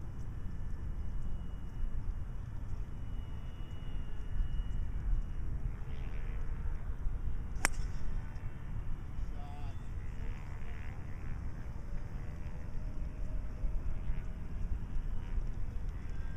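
Listening through the audio, nothing stood out as a technical fault at any point.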